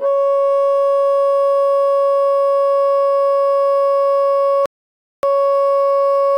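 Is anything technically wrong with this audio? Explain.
Yes. Playback stall, 4.66 to 5.23 s: the player likely ran out of data or had its thread blocked, so the music goes silent for 0.57 s mid-flow.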